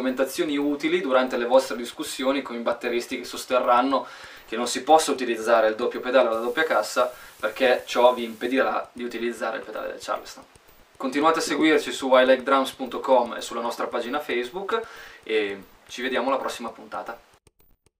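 From 6.32 to 8.52 s, dithered rounding to low bit depth with dither, which fits 8 bits, leaves an even hiss roughly 25 dB below the sound.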